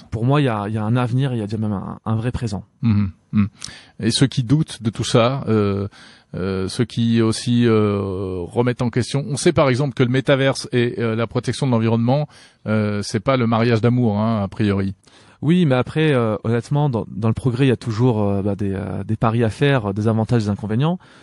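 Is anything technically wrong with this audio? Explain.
Yes. Two faults are audible in this speech recording.

MP3 compression runs through the whole clip. The speech sounds watery and swirly, with dulled treble and a metallic chirp on sibilants. This is likely heavy MP3 encoding at a low bitrate, around 48 kbps. With too few bits, the encoder cuts the top of the spectrum at a fixed frequency and drops weak frequency lines. Those lines flicker on and off from frame to frame, which produces the swirl.

Pre-echo occurs four times: at 4.47 s just after "ceux qui", at 4.93 s just before "ça euh euh ceux", at 8.77 s just before "en question", and at 20.27 s. Each time, a brief hiss of about 23 to 27 ms sits ahead of a sharp onset, roughly 12 to 18 dB above the surrounding noise, and the attack itself sounds softened. The encoder spreads quantisation noise across a whole transform block, which points to long blocks of about 48 ms with no switch to short blocks. 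Noise sized for each loud attack therefore leaks into the quiet moment before it.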